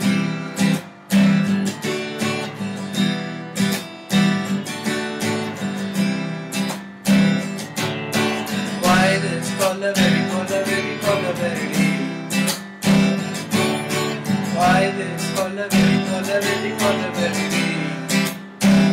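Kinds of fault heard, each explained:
Hard clipping: A harsh, gritty fuzz rides on every loud moment throughout the clip, because the signal was pushed about 12 dB past what a stage could pass. A few percent of the samples have their peaks sliced flat, and those flat tops spray high harmonics.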